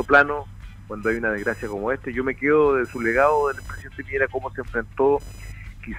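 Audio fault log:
throughout: computer activity noise, a buzzing chirp pulsing at roughly 1 kHz, some 30 dB below the sound, as processor or graphics load disturbs the shared audio ground; a spectrogram shows lines near 1 kHz and multiples, unrelated to the sound's envelope.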